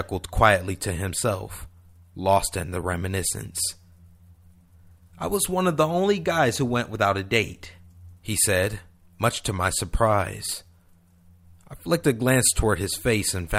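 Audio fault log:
Nothing to log here, since no faults turn up anywhere in this speech recording.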